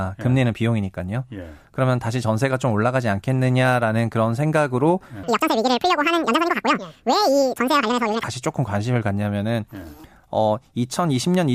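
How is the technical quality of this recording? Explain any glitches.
The recording has one clear glitch, in the middle of the speech. From 5.23 to 8.23 s, audio is read two samples at a time (double speed): the reader treats each pair of samples as a single frame, so the speech runs twice as fast and 12 semitones, an octave, higher, giving it a chipmunk-like sound.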